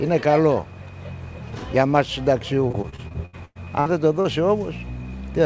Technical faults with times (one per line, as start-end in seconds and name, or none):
2.68-4.26 repeated packet loss (robotic sound)